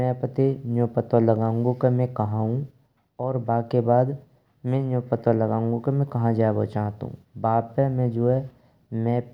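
No technical faults can be heard anywhere in the recording; the speech signal stays intact and continuous throughout.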